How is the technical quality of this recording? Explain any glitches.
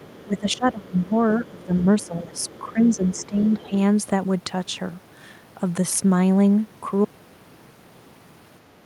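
The recording has three kinds of technical fault: echo leakage, speech suppression during double talk, and a dropout at the end.

Other side's voice leaking through, at 0.0–0.57, 1.59–1.64, 1.99–2.05 and 2.36–3.67 s: the echo canceller likely left a faint second voice about 25–30 dB below the speech.

Speech suppressed in double talk, from 0.26 to 3.72 s: the canceller likely ducked the talker during overlap, with dips of up to about 15 dB totalling roughly two seconds.

Audio dropout to silence, from 7.05 s to the end: the input was likely lost, leaving complete silence with no room tone.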